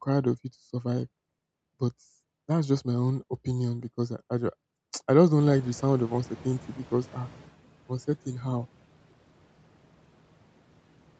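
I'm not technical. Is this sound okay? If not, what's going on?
No. Around 5.4 s, right after "I just", the room noise jumps up and the noise suppressor catches up slowly, so the noise comes through louder until about 7.5 s, before "uncertain how".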